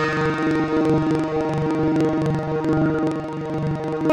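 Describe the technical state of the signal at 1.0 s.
At 1.0 s, as throughout, interleaved audio is read as planar, in blocks of about 43 ms (fitting 2048-sample blocks). The sound plays an octave low, doubled and choppy at 23.4 Hz.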